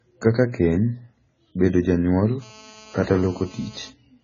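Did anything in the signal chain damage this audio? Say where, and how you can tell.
Yes. The whole clip has heavily damaged speech, with nothing above 7 kHz and a dull, smeared quality to the sound. This is likely AAC compression at the codec stage: at a rate that fits about 16 kbps, the encoder drops the top band and coarsely quantises what remains.

The second fault is GSM phone buzz, entering in the analogue wiring from 2.42 to 3.90 s, right after "bedo janyuol". It is a raspy buzz at 217 Hz with harmonics, steady as in a call, about 25 dB below the speech. Nearby handset bursts were rectified by the audio circuit.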